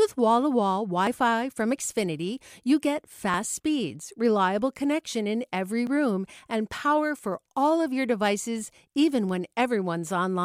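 At 4.59 s the speech jumps forward, and at 5.87 s it happens again with a bigger skip. There's no gap of silence either time, just a hard splice. That's most likely a dropped buffer (overrun): the software didn't collect the samples in time, the hardware wrote over them, and the audio on either side got butted together. The first loses roughly 10 ms, the second about twice that.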